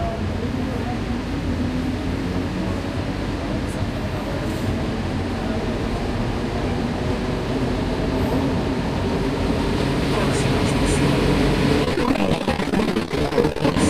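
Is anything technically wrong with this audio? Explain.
Yes. Repeated packet loss runs from 11.84 to 13.77 s. Many short gaps, up to 33 ms, are patched by repeating prior audio, leaving choppy, robotic sound.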